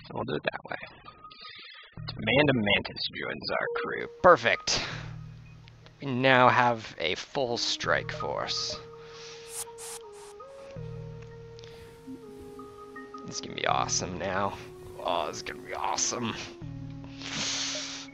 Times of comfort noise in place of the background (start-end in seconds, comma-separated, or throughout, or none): none